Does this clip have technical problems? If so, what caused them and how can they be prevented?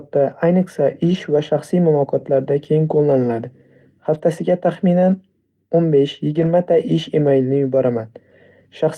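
Yes. Brief rough, noisy patches at 1.05 to 1.15 s, 4.13 to 4.19 s and 6.37 to 6.47 s are lost packets rebuilt from error correction: the decoder played low-bitrate backup copies instead of the missing audio. A more stable network path, or a larger jitter buffer, would prevent this.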